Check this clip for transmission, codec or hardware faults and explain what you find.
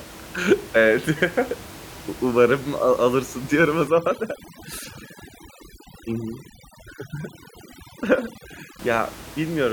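One fault is present: overdone noise removal, running from 3.88 s to 8.79 s, starting right after "alırsın diyorum o". A noise reduction stage is working far too hard here, pulling individual frequency bands down or out whenever their level sits close to its noise estimate. The room noise, about 18 dB below the speech, is the material it is attacking. The background drops and breaks up into twinkling specks, and the lower-level parts of the speech are stripped away with it.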